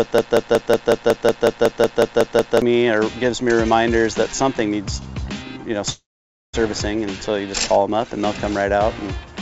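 The audio comes through a call path with no content above 8 kHz, which fits a G.722 wideband codec. A broken-record loop is already running when the clip starts and lasts until 2.62 s. A fragment of about 0.18 s repeats exactly, back to back. The audio meant for that stretch is lost. The likely cause is a stalled player or stream resending its last buffer. A call audio freeze runs from 5.90 to 6.55 s. The sound briefly carries on as a fading tail. About 0.53 s of silence follows. Then the audio resumes where it stopped, so nothing is missing and everything after it arrives about 0.64 s late. A jitter buffer that ran empty while packets were held up is the likely cause.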